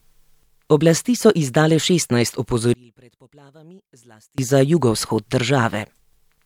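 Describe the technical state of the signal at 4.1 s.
At 4.1 s the speech has collapsed to a faint trace, about 31 dB below its surrounding level, inside a span running from 2.74 to 4.38 s. The likely cause is one channel inverted: with one side's polarity flipped, the centred voice cancels against itself on a mono sum, leaving only the small left-right difference. Unlike a dropout or gain dip, the sound doesn't stop or simply quieten evenly; a faint residue remains.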